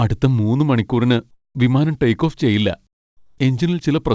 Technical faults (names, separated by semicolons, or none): comfort noise in place of the background